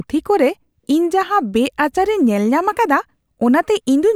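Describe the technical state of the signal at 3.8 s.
At 3.8 s the speech signal is intact, with no audible dropout, clipping, distortion or other technical fault at that point.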